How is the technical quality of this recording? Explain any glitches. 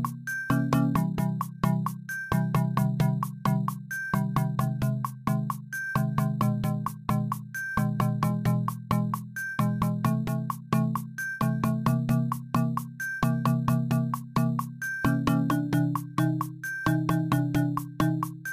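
The recording has one fault, present throughout. Crude rate conversion from 48 kHz to 44.1 kHz skips samples without filtering, leaving inharmonic fizz about 30 dB down on loud, high sounds, visible as stray spectrogram lines.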